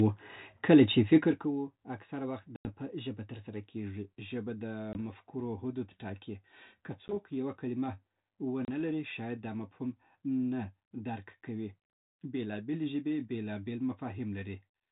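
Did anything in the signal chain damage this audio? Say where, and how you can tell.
Yes, the damage is packet loss on an ADPCM call, a network fault. The speech drops into hard-edged silent holes at 2.56 s (about 90 ms), 4.93 s (20 ms), 7.08 s (10 ms, before "یوه کلمه") and 8.65 s (30 ms, before "لري شاید دا مفهوم"). After each hole the speech returns slightly distorted. The decoder's adaptive predictor and step size lost track of the sender's, then recovered within tens of milliseconds.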